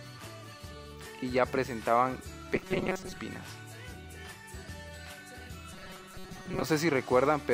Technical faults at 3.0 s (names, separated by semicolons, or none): robotic sound from repeated short buffers